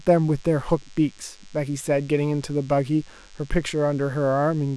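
From start to finish, a thin, steady buzz sits under the speech. It is DECT cordless phone buzz. A nearby DECT handset or base station sends a short radio burst every 10 ms. The audio circuit rectifies those bursts, so they become sound at a 100 Hz repeat rate. The result is a hard-edged tone with many harmonics. It stays well below the speech, about 30 dB down, but never stops.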